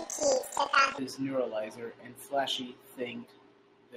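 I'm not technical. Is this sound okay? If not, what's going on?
No. For the first second, from 0.0 to 1.0 s, the speech sounds an octave too high, like a chipmunk, with a fast flutter running through it; it clears up just before "neuralizer and". This is planar audio read as interleaved: the left and right channels were stored in separate chunks of about 43 ms, but read as if they alternated. Each chunk plays twice at double speed, which raises the pitch and causes the flutter about 23 times a second.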